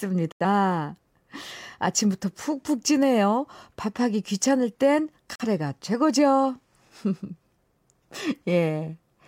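Digital broadcast dropouts at 0.32 to 0.45 s and 5.36 to 5.46 s: the receiver stopped getting valid frames and muted, so the speech drops into silence before returning. The first hole loses about 85 ms, the second about 43 ms, which fits two lost frames and then one.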